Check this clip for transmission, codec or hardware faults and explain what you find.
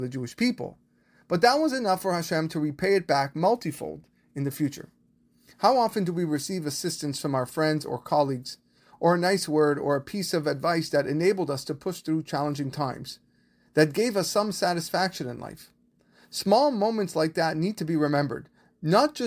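No faults can be heard anywhere in this speech.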